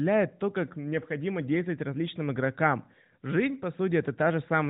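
No technical faults turn up anywhere in the speech. The narrowband mobile coding shows in the band limit near 4 kHz and a light synthetic edge, consistent with AMR-NB at its higher rate of about 12.2 kbps.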